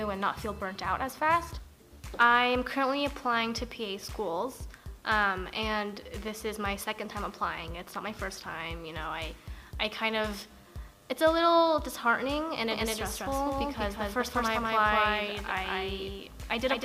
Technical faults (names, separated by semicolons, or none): doubled audio track